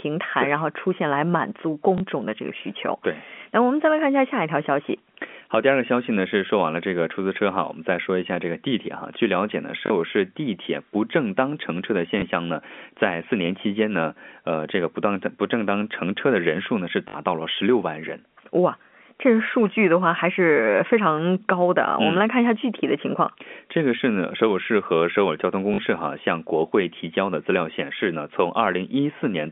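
Packet loss with last packet repeated occurs at 1.98–2.0 s, 9.86–9.9 s, 12.2–12.22 s, 17.08–17.14 s and 25.74–25.78 s. It lasts 20 to 60 ms and is heard as a buzzy stutter where two or three packets repeat in a run, and as a small blip where a single packet repeats, rather than the silent gap of zero-filled loss.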